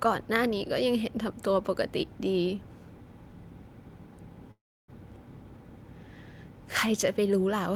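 A speech recording with a call audio freeze from 4.51 to 4.90 s: the last sound smears into a brief fading buzz, then about 0.29 s of silence, likely from a jitter buffer running dry. Unlike a packet-loss dropout, speech resumes exactly where it stopped, 0.37 s late, with nothing missing.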